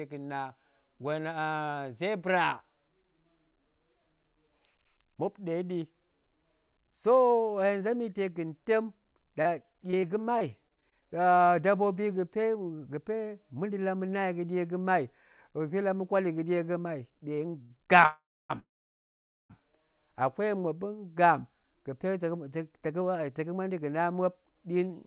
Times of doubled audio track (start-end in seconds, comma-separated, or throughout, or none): none